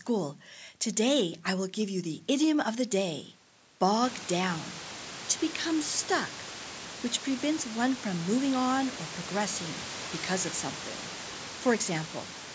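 No technical faults can be heard in this speech clip. The room's background noise rises by about 18 dB at around 4 s and then sits about 16 dB below the speech, and the call microphone processing leaves nothing above 8 kHz.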